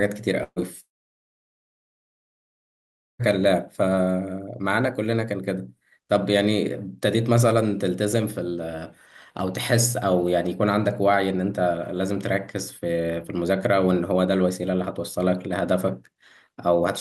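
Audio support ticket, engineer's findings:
Burst of packet loss, 0.43 to 0.59 s. Several consecutive packets lost or late, about 120 ms of speech never played. Jitter buffer's concealment extends the last sound as a decaying buzz/hiss, brief silence at the end, then resumes past the gap.

Long network dropout, 0.80 to 3.22 s, likely an interrupted network link. No packets for about 2.4 s. Concealment fades within about 50 ms, then roughly 2.3 s of silence. Audio returns with that stretch missing. Opus 64 kbps path, band-limited near 12 kHz.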